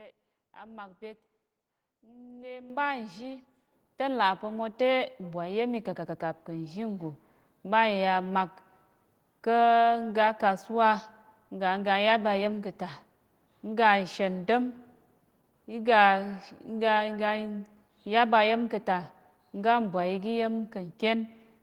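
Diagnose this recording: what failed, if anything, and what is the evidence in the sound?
Microphone volume stepped up at 2.70, 3.72 and 4.74 s (between "pa̱ mo" and "te mbwai"). The call software's gain control raised the device input level in single steps, about 10, 5 and 2 dB, lifting speech and background together.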